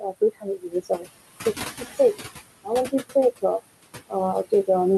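Noise suppressor artifacts run throughout: the room noise, sitting about 13 dB under the speech, is pulled down about 17 dB frame by frame, so the noise sinks between the words and rises under them. Speech cut by the noise suppressor occurs from 0.4 to 1.05 s, where around a third of a second of quiet speech is mistaken for noise and dropped by up to about 17 dB, and again from 1.79 to 2.15 s, where roughly a tenth of a second sinks by up to about 12 dB, sounding swallowed.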